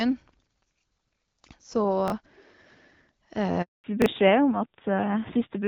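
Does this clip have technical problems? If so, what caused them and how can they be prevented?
Yes, there are three kinds of fault here.

First, chunks out of order, at 2.08 to 2.12 s and again at 4.02 to 4.06 s. Each time a 20 ms chunk shows up one slot late and plays after the chunk that should follow it. Nothing goes missing, but the sequence gets shuffled, leaving three hard joins that come across as a quick garbled blip. A jitter buffer that reorders by sequence number or timestamp before playout would stop this.

Then there's a handover gap from 3.62 to 3.84 s. The call switches networks, and for about 220 ms no speech frames arrive, so the sound dies off within a few tens of milliseconds and stays silent until the new link picks up. Whatever was said in that window is gone. Smoother make-before-break handover between networks, plus packet-loss concealment to bridge short dropouts, would cover this.

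Finally, there's a fallback to narrowband from 3.84 s to the end. Up to that point the HD Voice path is in play, with the light codec colouring you'd expect from wideband AMR at a clear rate, plausibly 12.65 kbit/s. After the switch, everything above 4 kHz disappears and the sound turns duller and a bit rough, which fits an older narrowband AMR codec at a low rate around 7.4 kbit/s. Keeping both network legs HD-capable, so the codec doesn't get renegotiated downward at handover, would prevent it.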